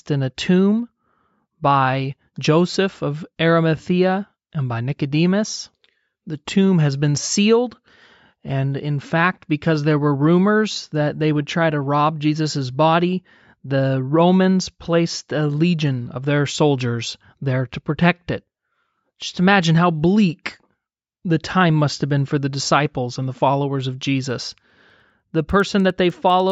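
Speech, and from 24.3 s, right after "and the followers of", to the end it has a resampler restarted on every block: each 100 ms block was converted on its own, leaving regular 10 Hz ticks at the block edges. Unlike hum, the ticks stop whenever the signal drops away.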